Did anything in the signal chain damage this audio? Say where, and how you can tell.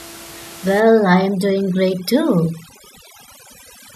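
Yes. The damage comes from overdone noise removal in the call-processing stage, starting at 0.8 s and running to the end. From there the background drops and breaks up into twinkling specks. The suppressor is set too hard. It shuts off individual frequency bands that sit near its noise estimate. With room noise only about 18 dB below the speech, quiet speech detail falls into those bands and vanishes too.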